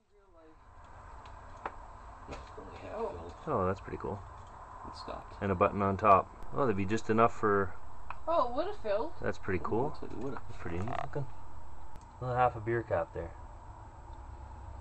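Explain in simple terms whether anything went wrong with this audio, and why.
At 6.43 seconds there is a low thump, and a second one at 11.96 seconds, while the sound itself carries on unchanged in between. This is a DC step: the waveform's resting zero line suddenly jumps to a new level, holds there for about five and a half seconds, then drops back. Each abrupt shift of that baseline pushes the speaker cone in or out, and that sudden push is what you hear as the thump.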